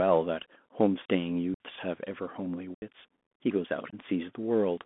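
From start to end, the speech carries Bluetooth CVSD headset codec damage. Band-limited to 200 Hz to 3.5 kHz, it has scratchy sibilants and granular hiss, fitting a 64 kbps CVSD link.

Unconcealed Bluetooth headset packet loss then cuts silent holes at 1.54–1.60 s, 2.75–2.83 s and 3.90–3.95 s. Lost radio packets leave abrupt gaps of 60 ms, 75 ms and 22.5 ms.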